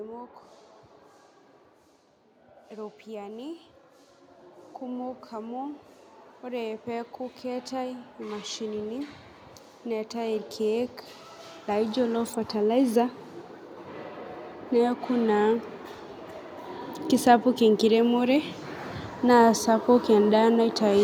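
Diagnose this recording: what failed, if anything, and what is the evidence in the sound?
The call processing's automatic gain rising is the failure: the gain control judged the input too quiet and turned its gain up slowly. From 4.84 to 13.19 s the level climbs by about 13 dB, with speech and background noise swelling together rather than the voice alone getting louder. A second, gentler rise of about 4 dB runs from 17.23 to 19.67 s. Over both stretches the background grows along with the speech, showing a whole-signal gain change.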